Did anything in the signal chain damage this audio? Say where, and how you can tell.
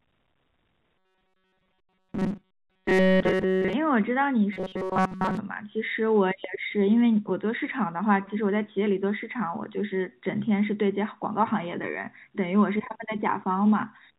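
Yes: robotic sound from repeated short buffers at 0.98–3.73 s and 4.53–5.37 s. A 188 Hz buzz is imposed on the speech, likely a starved buffer looping 5.3 ms chunks.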